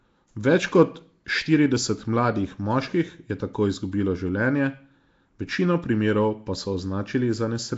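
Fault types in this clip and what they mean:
Nellymoser compression: The speech carries a rough, hissy halo and a smeared, underwater quality from start to end, and nothing is present above 7.7 kHz. The likely cause is Flash's old Nellymoser Asao microphone codec. It codes short blocks on a fixed bit budget and fills the weak bands it cannot afford with noise, and the damage fits about 32 kbps. That noise fill sets it apart from plain band-limiting, which sounds dull but clean.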